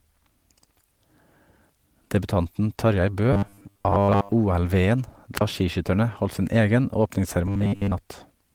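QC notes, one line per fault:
3.33–4.35 s and 7.47–7.93 s, robotic sound from repeated short buffers: the speech turns into a rigid, metallic buzz at a fixed 100 Hz, the second stretch starting just after "holdt sin egen". Most of the audio there is loops of its own last snippet, likely about 10 ms buffers replayed while fresh audio arrived too slowly.
5.36–5.41 s, wireless microphone squelch dropout: hiss swells briefly, the sound drops to near silence for about 36 ms, then returns. This is the radio link fading far enough that the receiver's squelch muted the output.
6.03 s, lost packet rebuilt from error correction: a brief rough, noisier patch of about 20 ms, with no gap, just before "holdt sin egen". This points to one lost packet whose low-bitrate backup copy, carried in the following packet, was decoded in its place.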